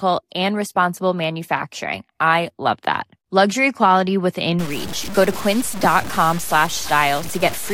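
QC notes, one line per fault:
4.59–7.73 s, low bit depth without dither: right after "quality within", the speech turns grainy, with distortion that tracks each syllable, and quiet tails sputter or drop out. The waveform shows coarse visible steps that fit a 5-bit signal, likely truncated. The spectrogram shows broadband hash around 15 dB below the signal.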